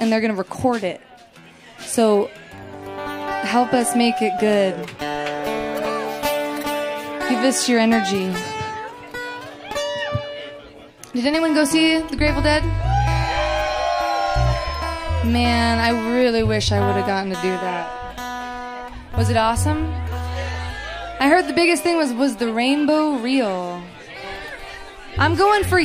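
No technical fault can be heard anywhere in the recording, and the signal holds steady throughout.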